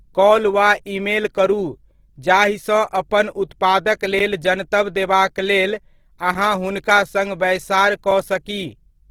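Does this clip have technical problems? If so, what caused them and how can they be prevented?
Yes. Throughout, the speech has a rough, grainy, noisy texture, likely from Opus compression in its music (CELT) mode at about 16 kbps. Bands are kept full but filled with noise instead of detail, so a spectrogram shows smeared, speckled energy reaching about 20 kHz rather than clean harmonics. Encoding at a higher bitrate, or using Opus's speech-oriented mode at low rates, would prevent this.

There is also a block of digital silence at 4.19 s, between "जाहिसँ अपन उत्पादक" and "जनतब देबाक", lasting about 11.6 ms, which fits a 512-sample buffer. Two shorter ones follow at 6.35 s and 8.11 s, each about 5.8 ms, which fits 256-sample buffers. Output buffers likely went unfilled, so the audio drops abruptly to silence and back, producing ticks. On a waveform these are flat silent stretches with sharp edges, and on a spectrogram they appear as thin vertical gaps. 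Larger buffers or higher processing priority would keep the audio thread from missing its deadlines.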